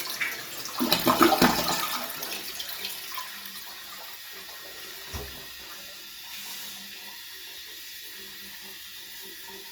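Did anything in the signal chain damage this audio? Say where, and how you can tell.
Yes. Opus compression runs throughout, likely from the codec stage. Tonal parts sound grainy, rough and noisy, though the spectrum stays full, reaching about 20.4 kHz. That fits Opus's CELT music mode near 24 kbps, filling starved bands with folded or noise energy.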